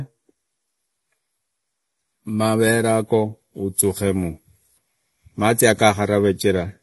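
From start to finish the speech sounds dull and smeared, with nothing at all above 11.6 kHz and a plainly audible fizzy, warbling texture on sibilants and held sounds. The cause is likely AAC compression, in the AAC-LC form, at a low rate that fits roughly 32 kbps. With so few bits, the encoder drops the top of the spectrum and coarsely quantises what remains, leaving gaps and swirling noise in the high bands.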